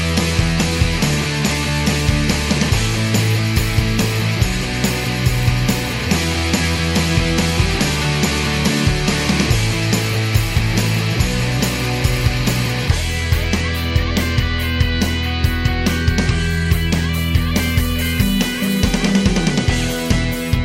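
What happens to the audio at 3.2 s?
Nothing goes wrong at 3.2 s; the audio runs through that moment intact, with no dropout, click or distortion.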